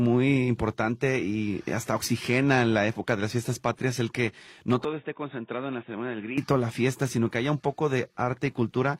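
At 4.85 s the sound abruptly turns dull and boxy and drops to a noticeably lower level, roughly 10 dB down, with no gap at the change. Nothing passes above 3.7 kHz until 6.38 s, when the full, brighter tone returns. This is most likely an input switched to a poorer device, whose narrower band and different gain replace the original path. On a spectrogram the upper energy is sharply sheared off at 3.7 kHz for that span; the waveform envelope visibly shrinks, and a faint new noise floor sits far below the signal.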